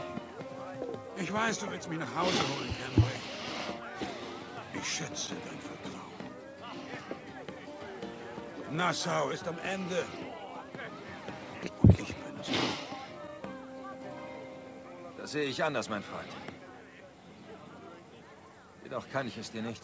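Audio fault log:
No faults logged; the audio carries through a call path whose band stops at 8 kHz, consistent with a wideband codec.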